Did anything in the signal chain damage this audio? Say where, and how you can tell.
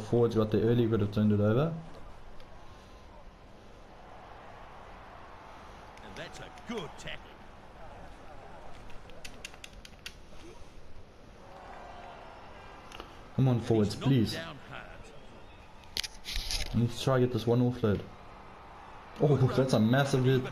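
Yes: a faint hiss rides loud, bright passages throughout and vanishes in silence, pointing to sample clock jitter at the converter, its timing wobbling under a microsecond.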